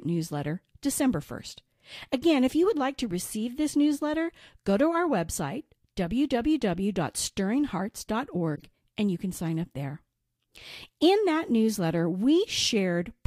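A speech recording with one short burst of damage between 8.55 and 8.62 s, where a corrupt frame was decoded rather than concealed. For about 76 ms the sound is replaced by a brief chirpy, noisy blip. The decoder accepted a compressed frame whose bits had been flipped, so misread gains and codes placed energy at the wrong frequencies. The length points to a few consecutive frames being hit, and the spurious energy peaks at around -25 dBFS.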